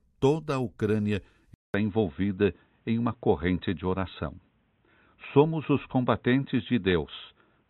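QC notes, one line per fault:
1.54–7.7 s, input switched to a poorer device: the capture likely moved to a different, lower-grade input at this point, such as another microphone or a headset's call profile. After a gap of about 200 ms the sound comes back narrower and duller, with nothing above 3.9 kHz. It also sits at a noticeably different level, a shift of roughly 5 dB, over a new but faint background noise floor that stays well below the signal, through to the end.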